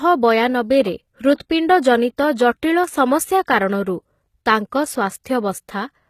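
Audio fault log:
throughout, HE-AAC compression (likely cause): The speech carries plainly audible codec damage, with nothing above 14.9 kHz. The upper band sounds synthetic, as if rebuilt by copying lower-band content upward under a coarse envelope rather than coded directly. Its harmonics do not line up with the lower band across the crossover, so sibilants come out gritty and metallic or lispy. The degree of damage fits a low bitrate of around 20 kbps.
1.34 to 1.40 s and 5.24 s, pre-echo: Before two sharp onsets, a short hiss rises ahead of the attack, lasting 59 ms at the first and 16 ms at the second. Each attack falls late in a transform block, so quantisation noise sized for the loud onset is spread back across the quiet stretch before it. The leading hiss makes the onsets sound softened and smeared rather than crisp.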